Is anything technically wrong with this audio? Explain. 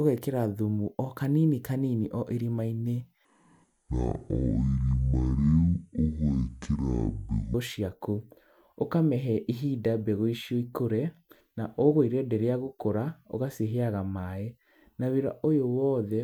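Yes. From 3.25 to 7.54 s there is a section at the wrong speed. The likely cause is that this stretch was played back against the wrong clock, running at 0.53 times its recorded rate. Because speed and pitch are tied together in that kind of error, the speech drops by about ten semitones and slows to roughly half pace, so it sounds deep and dragged. Normal speed returns abruptly at 7.54 s.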